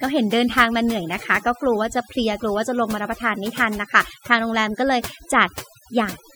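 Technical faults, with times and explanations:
Throughout, overdone noise removal: the noise reduction applied to this speech was set far too aggressively, so every frequency band whose level sits near the tool's noise estimate is pulled down hard or shut off entirely. The background collapses into near silence scattered with twinkling specks where isolated bands flicker open and closed, and the softer components of the voice are removed along with the noise.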